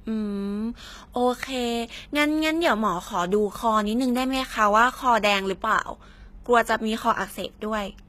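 A speech recording with HE-AAC compression damage that is plainly audible from start to finish. The treble sounds bright but synthetic. The s sounds come out gritty and lispy, with a metallic edge. This likely comes from spectral band replication. The codec keeps only the lower band and fills the top by copying lower bands upward, so upper harmonics no longer line up with the real ones. The damage fits a low bitrate around 20 kbps.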